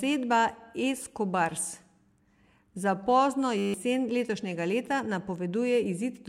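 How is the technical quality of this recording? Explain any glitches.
One glitch disrupts the recording. At 3.58 to 3.74 s, just after "za pozno", a system hang loop occurs. The machine stalled while the audio hardware kept replaying a 10 ms buffer. That repetition produces a steady 100 Hz buzz, and about 150 ms of audio is lost.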